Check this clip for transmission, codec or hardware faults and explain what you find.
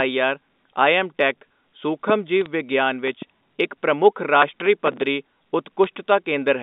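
Three kinds of fault are audible.

Bit errors on a digital phone line appear at 2.41 to 2.46 s and at 5.84 s. Flipped bits corrupt single samples, giving sharp ticks and brief crackle.

A loud pop, two in quick succession, comes at 3.08 to 3.24 s, about 5 dB above the sound. A voltage spike is the likely cause.

Processor overload crackle runs from 4.42 to 5.02 s. Around thirty missed deadlines, fitting roughly 3 ms buffers, replay old audio with hard edges, heard as gritty tearing.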